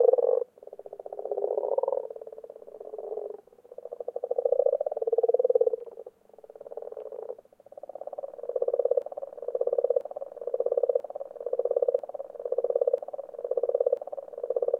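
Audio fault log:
9.02–14.8 s broken-record loop: The player or stream likely stalled and kept re-sending the last fragment it held, so a 0.99 s slice of sound repeats identically six times, back to back, through the end of the clip, replacing whatever should have followed.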